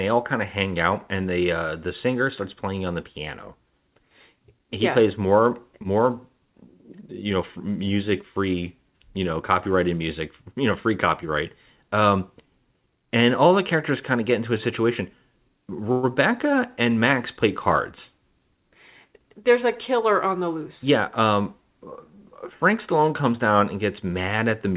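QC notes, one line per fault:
15.92–16.06 s, call audio freeze: a fading 111 ms buzz. Packets likely stalled and the jitter buffer ran dry. Speech resumes 111 ms late, nothing lost.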